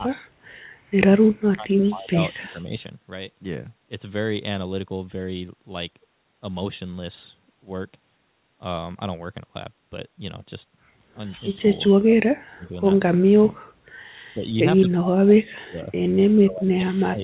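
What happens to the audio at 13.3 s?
The speech drops out sharply from 13.2 to 13.75 s, a case of speech suppressed in double talk. About half a second of the talker is affected. At its deepest the level falls by roughly 35 dB, so parts of the sound nearly vanish. The likely cause is an echo canceller meeting both sides talking at once. It could not tell the talker from the loudspeaker echo, so it turned everything down. The narrow band above stays as it was, with nothing above 4 kHz.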